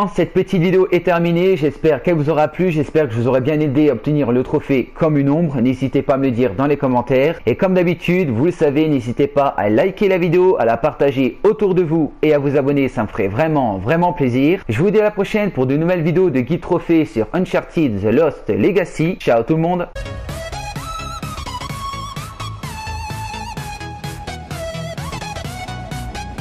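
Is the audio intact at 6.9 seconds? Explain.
No. Hard clipping runs throughout, driving peaks about 4 dB past the ceiling. Waveform tops are sliced flat, spectrogram shows high harmonic smears, heard as crackle on loud moments.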